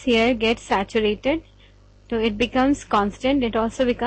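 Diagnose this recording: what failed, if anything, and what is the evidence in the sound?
Nothing in the signal points to a failure at any stage, from the analogue wiring and converter through to storage and playback, and no event in the sound calls for a diagnosis.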